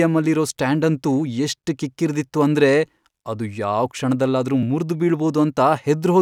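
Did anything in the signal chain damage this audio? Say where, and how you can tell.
Yes. There is a block of digital silence at 0.51 s, just before "ಸ್ಟ್ಯಾಂಡಂತೂ ಎಷ್ಟ್ ಕಿಕ್ಕಿರ್ದಿತ್ತು ಅಂದ್ರೆ", and another at 4.63 s, right after "ಅಂದ್ರೆ ಅದು ಯಾವ್ ಕ್ಷಣದಲ್ಲಾದ್ರೂ". The gaps last 2.9 ms and 1.86 ms. Each is a hard drop to silence and back with no fade, so it is heard as a tick. This points to the driver or buffer stage, where output blocks weren't filled in time. The first gap fits a 128-sample buffer.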